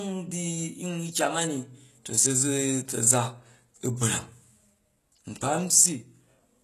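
From start to finish the speech has a plainly audible coding texture. The treble sounds bright but synthetic, and the s sounds come across gritty and lispy. That's the signature of HE-AAC compression, likely at a very low rate; the damage level fits something around 16 kbps. Only the lower band is really coded, and the top end is rebuilt by copying lower bands upward, so the harmonics don't line up. Nothing is present above about 12.3 kHz.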